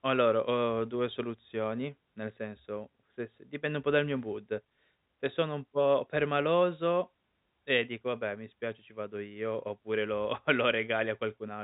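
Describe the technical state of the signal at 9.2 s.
At 9.2 s the speech is intact, with only the steady telephone-band character of G.711 coding, which holds everything below about 3.8 kHz, and no fault at that moment.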